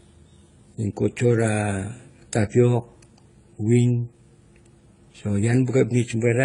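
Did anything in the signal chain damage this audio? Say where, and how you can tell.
Yes, at the codec stage. Across the whole speech clip there's nothing above 10.8 kHz, and the artefacts don't sound like a single encoder: different codecs' artefacts are heard layered together. That mix is most likely transcoding between lossy codecs, with an AAC-LC pass near 24 kbit/s re-encoded as HE-AAC around 32 kbit/s. The second encoder spends its bits on the first one's damage, adds its own, and the low cut-off carries through.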